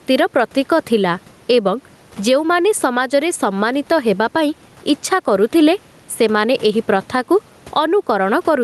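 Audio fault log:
Throughout, gain pumping: the gain swings by around 10 dB. Likely the input gain is set far too high, and a fast limiter pulls it down, squashing loud and soft parts together.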